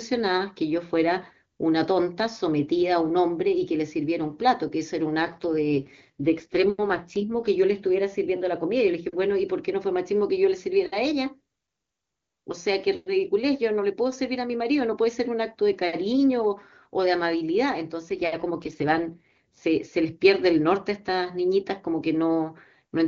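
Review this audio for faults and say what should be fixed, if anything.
AMR rate drop at 5.22 to 7.48 s and again at 18.09 to 19.58 s. The speech turns rougher and more synthetic, but the bandwidth holds and there is no gap. That fits the link pushing the AMR-WB codec down from 23.85 to 8.85 kbit/s and spending the freed bits on error protection. Improving radio coverage or link margin on the weak leg would keep the codec at its full rate.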